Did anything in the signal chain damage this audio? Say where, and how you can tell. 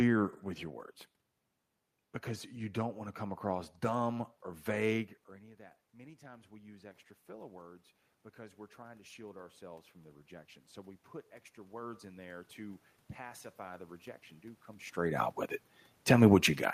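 Yes. Automatic gain rising in the call processing: from 8.35 to 10.59 s, after the input drops by about 23 dB, gain climbs about 3 dB, then about 6 dB from 11.55 to 15.27 s. Voice and room noise swell together, visible as a slow, uniform brightening across the spectrogram and a ramping waveform envelope.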